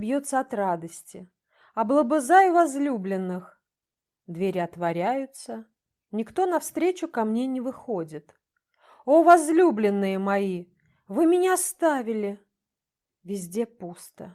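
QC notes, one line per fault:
No faults found in this clip. Nothing in the audio calls for a timestamped entry.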